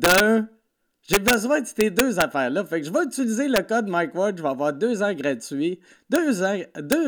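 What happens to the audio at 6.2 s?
At 6.16 s, just after "avoir deux ans gratuits", an integer overflow wraps a peak to the opposite sign, giving a sharp crack: a sudden waveform jump to the opposite polarity and a broadband vertical spectrogram stripe.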